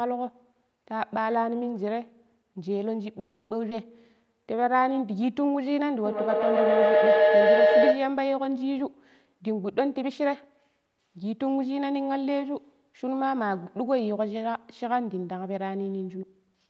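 From 3.19 to 3.52 s there is a call audio freeze: the last sound carries on as a fading buzz for about 0.31 s, likely because packets stalled and the jitter buffer ran dry. Playback then resumes where it stopped, with nothing lost.

A skip ahead follows at 3.70 to 3.73 s. Roughly 150 ms of audio is dropped, and the two sides are butted together almost seamlessly.

From 4.02 to 4.84 s a jitter buffer slow-down repeats pitch periods to rebuild reserve. This adds 125 ms, so the audio plays at 86% speed with unchanged pitch and sounds drawn out.

Between 6.06 and 8.20 s a feedback howl builds as a microphone-to-loudspeaker loop gains level on each pass. It narrows to a tone near 700 Hz, peaks about 9 dB above the speech, and the loop repeats roughly every 100 ms.

Jitter buffer speed-up trims pitch periods to cut excess delay, removing roughly 150 ms each time. This happens from 9.40 to 10.65 s at 110% speed and from 16.17 to 16.68 s at 124%. 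Pitch is held, but delivery sounds hurried, more so in the second stretch.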